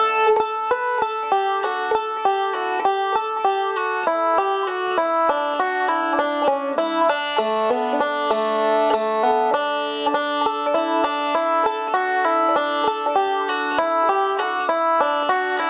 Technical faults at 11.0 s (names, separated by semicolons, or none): gain pumping; clock drift between sender and receiver; repeated timing corrections